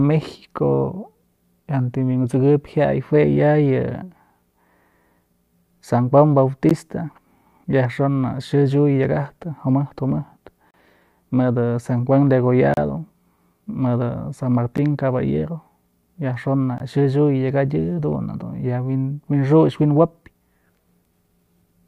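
Speech with five gaps between stream segments, brief hard-edged dropouts to digital silence at 6.69 s (about 14 ms), 10.71 to 10.74 s (about 32 ms), 12.74 to 12.77 s (about 32 ms), 14.77 s (about 10 ms) and 16.78 to 16.80 s (about 19 ms). All fall at segment boundaries, matching 2-second segments. The timestamps of consecutive segments don't abut, so the player pads the hole with silence. Nothing is lost from the speech, but each gap delays what follows.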